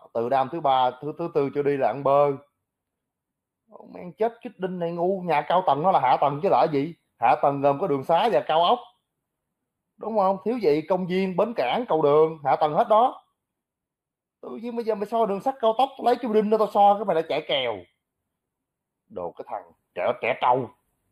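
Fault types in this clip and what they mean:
Channel delay (comb filtering): one channel lags by roughly a tenth of a millisecond before the mono sum, cancelling a notch near 5 kHz and sounding hollow or phasey throughout.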